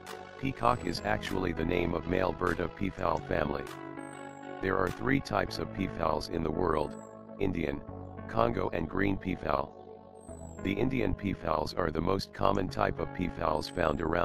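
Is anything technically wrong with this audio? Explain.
Yes. Throughout the audio there is a fast, rough flutter, a buzzy robotic tremolo that never lets up, with the level pumping by about 11 dB at a rate of around 50 times a second. This is overlap-add ripple. The audio was split into windowed frames and joined back together with an overlap whose windows don't add up to a steady gain. The level therefore swells and dips once per frame.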